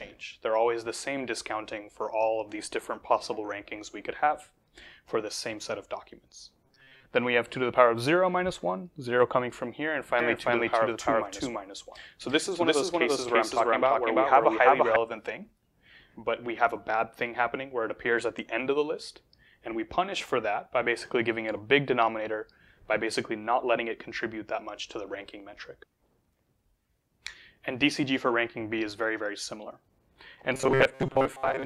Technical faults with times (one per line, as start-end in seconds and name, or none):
6.66-7.10 robotic sound from repeated short buffers
10.20-14.96 doubled audio track
30.54-31.65 robotic sound from repeated short buffers